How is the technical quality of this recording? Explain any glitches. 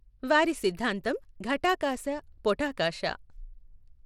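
The recording has a clear, ongoing codec problem. Across the whole speech clip you can plainly hear what's most likely Bluetooth SBC compression. SBC splits the signal into a handful of wide frequency bands and hands out bits with no real model of hearing, so at a tight budget, which here fits roughly 96 kbps, the upper bands get starved and everything is coarsely quantised. The result is treble that flickers and a gritty, aliased edge riding on the sound, with nothing at all above about 17.2 kHz.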